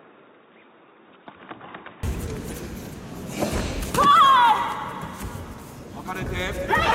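From the start to 2.03 s the audio sounds dull and boxy, with nothing above 3.8 kHz, and it sits a few decibels quieter, about 5 dB, over a faint new noise floor. At 2.03 s it clears up with no gap. This is most likely an input switched to a poorer device, then back. A simple low-pass filter or codec bandwidth drop would not also shift the level, tone and background noise together at one instant.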